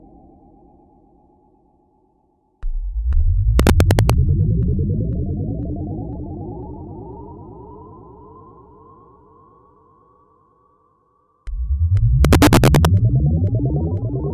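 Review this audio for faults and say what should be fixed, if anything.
Integer overflow cracks appear at 3.60–4.10 s and 12.25–12.85 s. Peaks pushed about 1 dB and about 2 dB past full scale wrap to the opposite sign, producing sharp cracks on loud passages. Fix by saturating (clamping) sums and gain stages instead of letting them wrap.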